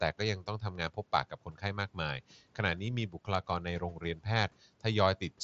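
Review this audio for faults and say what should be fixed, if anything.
Speech cut by the noise suppressor occurs four times: 0.42–0.98 s, 1.3–1.63 s, 3.09–3.28 s and 3.8–4.26 s. In each span, stretches totalling roughly a sixth of a second (nearer a tenth at 3.09 s) drop by about 10 to 12 dB. The suppressor misreads soft consonants or word endings as noise and turns them down with the background. The waveform envelope dips abruptly mid-phrase, and the spectrogram shows thinned, gappy consonant energy. Lowering suppression strength or lengthening its release would prevent this.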